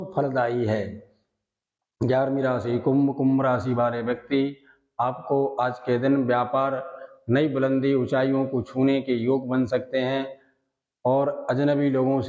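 No technical faults can be heard anywhere in the audio. It has passed through a call's microphone processing, which trims the deepest bass, as that path normally does.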